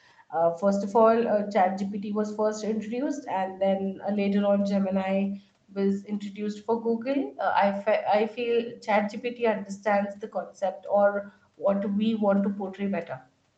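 Speech, with no technical faults to report.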